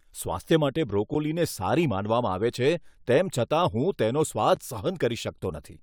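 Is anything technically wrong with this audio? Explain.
Yes. This speech clip has two blocks of digital silence, at 1.14 s and 4.56 s, each about 10.7 ms long. Both times the signal cuts out and back without any fade, and the short hole is heard as a tick. The matching lengths fit a 512-sample output buffer that the program failed to fill in time. A fade or concealed dropout would sound smoother.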